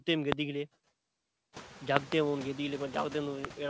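A noise suppressor in the chain is pulling down what it treats as steady background by about 15 dB, frame by frame, so in this speech clip the noise dips between phrases and swells back under them, and the room noise climbs by about 19 dB around 1.5 s. Loud pops, likely voltage spikes from a switch, plug or driver glitch, land as a single sharp pop at 0.32 to 0.34 s, a pair between 1.97 and 2.14 s, and another single pop at 3.45 to 3.47 s. Each sits roughly 25 dB above the speech, which carries on underneath. Nothing is heard above 8 kHz, which fits a G.722 call path.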